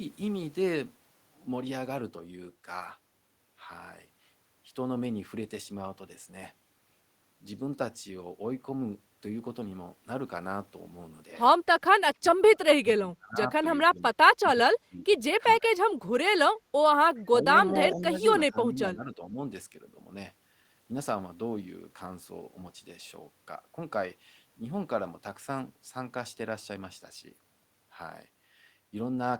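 Speech suppressed in double talk pulls the speech down by roughly 10 to 30 dB in choppy bursts at 12.2–12.6, 12.78–13.52, 13.89–14.18, 14.56–15.25, 15.59–16.38, 17.28–17.58, 17.93–18.26 and 18.49–19.38 s. The likely cause is an echo canceller that mistook the talker for loudspeaker echo while both sides spoke. Unlike packet-loss dropouts, the speech is turned down by the echo canceller rather than lost in transmission.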